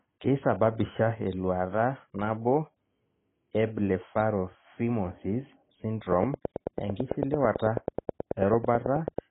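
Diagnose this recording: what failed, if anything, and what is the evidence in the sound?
The whole clip is band-limited, with nothing above 3.8 kHz, and the speech sounds dull and smeared, with a warbling, fizzy texture on sustained vowels and sibilants. The stage is the codec, likely AAC compression, consistent with AAC-LC at a rate that fits about 16 kbps. The encoder starved the upper bands and coarsely quantised what remained. An analogue low-pass filter or plain resampling would give a clean cut-off without this swirling, unstable texture.

From 6.13 s to 9.19 s a train of clicks runs over the audio, about thirty near-identical pulses at a steady 9.15 per second, peaking around 15 dB above the speech and audible in the pauses too. This points to the analogue wiring or interface, likely interference from nearby equipment or a faulty connection or power supply injecting pulses. Buffer dropouts would leave gaps in the audio itself, whereas these clicks keep a fixed rhythm regardless of the speech.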